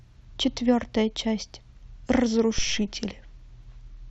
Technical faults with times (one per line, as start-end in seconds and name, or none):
2.58-2.95 phantom power thump